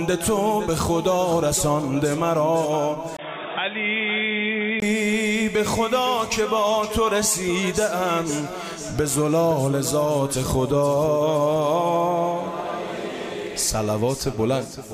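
At 3.17 s there is a gap of about 20 ms, and from there to 4.82 s the audio turns dull and boxy, with nothing above 3.8 kHz, the level down by roughly 5 dB, and a new noise floor about 45 dB below the signal. The sound then returns to full bandwidth. The cause is likely an input switched to a poorer device: capture briefly moved to a narrower-band microphone or headset call profile with its own tone, gain and noise.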